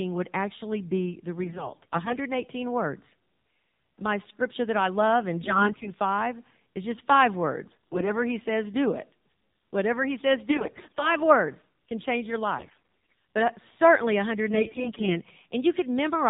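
The whole clip runs through the AMR narrowband mobile codec at 7.4 kbps. Nothing above 4 kHz survives, and the low bitrate makes the voice plainly buzzy and synthetic.

Layered on top are AMR bit errors at 1.42–2.17 s, 5.44–5.92 s after "that I love in", 7.68–8.13 s, 10.50–11.16 s between "he says" and "words can change your", 12.58–12.76 s, and 14.54–15.20 s after "but uh certainly". Roughly 5 to 15 percent of the weakly protected bits got flipped, so the excitation pulses land in the wrong places. The voice keeps its pitch and level but turns hoarse, scratchy and gargly.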